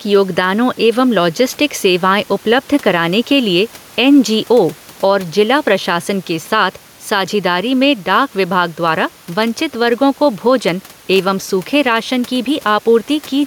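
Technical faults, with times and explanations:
Throughout: gain pumping; the level swings about 5 dB, likely a fast limiter taming excessive microphone gain.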